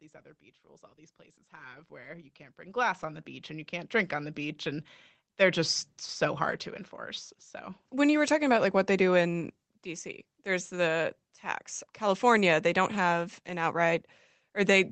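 A speech recording in which automatic gain rising lifts the whole signal from 0.62 s to 5.9 s, between "other beach" and "so hard to enforce". The gain control judged the input too quiet and stepped its gain up by about 19 dB over those five seconds, so voice and background noise swell together. On the waveform the envelope widens steadily across that span. On a spectrogram the entire band brightens gradually, with the call path's cut-off near 8 kHz still visible above it.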